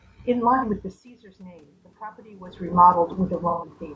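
Low-delay AAC compression, throughout the speech: the rough, grainy texture, noisy gaps between harmonics and synthetic-sounding top band likely come from AAC-ELD's short frames, which fits roughly 32 kbps.

AAC frame loss with concealment, 0.56 to 0.64 s: the decoder patched about 60 ms, likely two frames, from the last good spectrum, leaving a brief smeared, phasey blur.

Automatic gain rising, 1.37 to 2.68 s: the gain control heard a quieter input and lifted its gain by about 4 dB, so the voice and background swell together.

AAC frame loss with concealment, 3.50 to 3.71 s: a longer gap of about 120 ms, fitting four frames, is filled with a noisy, smeared patch that decays before the signal returns.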